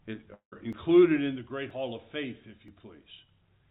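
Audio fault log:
0.34–0.54 s, long network dropout: the sound breaks off and its last moment carries on as a decaying buzz for a fraction of a second, then near silence, before the audio resumes with about 0.18 s of material gone, likely because packets never arrived and the receiver concealed the gap.
0.73, 1.71 and 2.68 s, audio missing between chunks: at one-second spacing a sliver of about 20 ms vanishes and the two sides join with no silence, giving brief skips in the band-limited call-codec sound, likely lost while the processor closed one chunk and opened the next.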